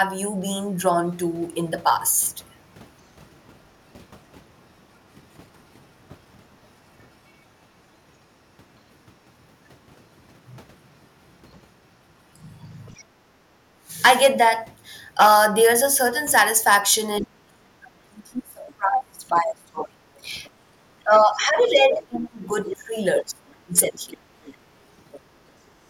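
Speech runs through the whole recording with hard clipping on its peaks. The level drives roughly 9 dB past what the converter or gain stage could pass, so peaks are cut flat. That affects only a small fraction of samples, but each flattened top throws off upper harmonics, heard as a brittle crackle riding on the louder syllables rather than as continuous fuzz. Traces of the other side's voice leaking through appear at 12.36 to 13.04 s, as brief scraps at 18.70 to 18.74 s and 20.44 to 20.50 s, and most clearly from 21.66 to 25.2 s. That last stretch is fairly strong, while the earlier ones sit far below the main talker. A far-end signal played on the talker's loudspeaker and left in the microphone by the echo canceller is the likely source. Speech suppressed in double talk occurs at 13.42 to 13.92 s with a moderate dip, from 17.2 to 20.01 s where the voice falls away very deeply for much of the span, and from 21.04 to 24.02 s with a deep, broken drop. 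Here the talker's level collapses in pieces while the other side is active, likely because the echo canceller could not tell near speech from loudspeaker echo and attenuated both, and in the last span the leaked far voice runs alongside the gaps.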